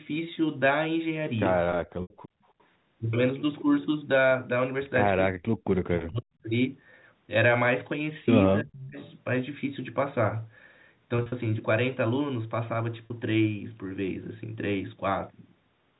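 A 16-second speech recording from a call shows packet loss with pitch repetition at 2.02 to 2.10 s (80 ms, which fits four 20 ms packets), at 11.16 to 11.32 s (100 ms lost in pieces over 160 ms, the longest run 40 ms), and at 13.06 to 13.10 s (40 ms). The receiver filled each gap by repeating the last pitch cycle, so the sound briefly holds with a buzzy, static quality. On a spectrogram the harmonic lines go perfectly flat for those stretches, and the waveform shows identical cycles repeating. From 2.28 to 2.42 s the background is gated by the echo canceller: while far-end audio played, the canceller pulled the microphone down by about 31 dB for roughly 150 ms, and the room tone drops out, then returns. This appears as a near-empty vertical band in the spectrogram's noise floor and a flattened trace in the waveform. An echo leak follows at 2.48 to 2.64 s and again at 8.98 to 9.09 s: a faint copy of the voice about 322 ms late, sitting around 40 dB and then 35 dB below the speech. 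It shows as a weak, delayed ghost of the earlier harmonic pattern, likely because the far side's echo canceller on a loudspeaker did not fully remove what its microphone picked up. Speech is suppressed in double talk from 5.32 to 6.45 s, about 700 ms of it affected with drops of roughly 40 dB, and from 8.63 to 8.96 s, about 300 ms affected with drops of roughly 35 dB. Here the voice dips while the other party talks, likely because the canceller could not separate the local talker from the loudspeaker echo and attenuated both. The spectrogram shows the speech energy dropping, and the waveform envelope shows abrupt notches.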